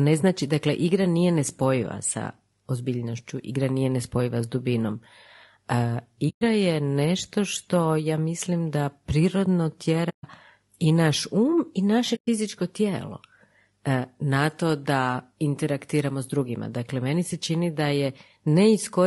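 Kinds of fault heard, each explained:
Low-delay AAC compression: The speech was likely squeezed through AAC-ELD, the low-delay coder used for video calls, whose short frames capture pitch harmonics poorly and spend bits inefficiently. The damage is plainly audible throughout: the speech sounds rough and grainy, with noise filling the gaps between harmonics and an upper band that sounds thin or synthetic, which fits a bitrate around 32 kbps.
AAC frame loss with muting: Runs of coded frames went missing and the decoder filled them with silence, so overlapping windows fade the sound down and back up rather than cutting hard. Three soft-edged holes result: about 120 ms at 6.29 s just before "je nešto što ja", about 140 ms at 10.09 s between "ja mislim da prirodno" and "i naš", and about 120 ms at 12.15 s after "i naše".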